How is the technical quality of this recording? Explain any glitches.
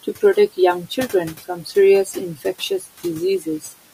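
The recording has two kinds of glitches, both from a noise suppressor.

Noise suppressor artifacts run through the whole clip. The suppressor pulls down bands it judges to be steady noise by about 15 dB, frame by frame. The room noise, about 19 dB below the speech, dips between phrases and swells back under them.

Speech cut by the noise suppressor occurs twice, from 2.6 to 2.87 s and from 3.4 to 3.71 s. Here the suppressor treats quiet parts of the speech as noise. It drops them by about 10 and 11 dB, for about a tenth of a second each. Those sounds come out faint and swallowed.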